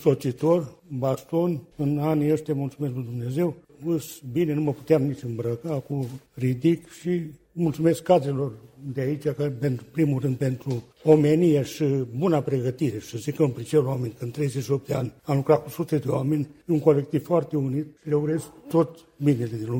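The signal holds steady throughout, with no dropouts, distortion, or other technical disturbances to be heard at any point.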